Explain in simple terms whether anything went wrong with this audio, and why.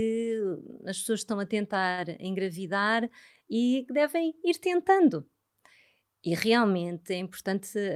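A short stall from a late packet comes at 1.91 to 1.99 s. A piece of the speech stream arrived later than it was due, and the receiver's holding buffer ran dry. Instead of going silent, it stretched the last bit of sound for 61 ms until the missing piece turned up, then carried on exactly where it left off. Nothing is lost, but one sound is held a little too long, and everything after it plays 61 ms later.

A jitter buffer speed-up runs from 7.43 to 7.85 s. By this point the buffer was holding more audio than it wanted, which adds delay. To catch up, the receiver snipped out many tiny slices of the speech, each only a single vocal vibration or a few long, about 40 ms in total. That makes this stretch play at 108% speed with the pitch unchanged, so it sounds slightly rushed.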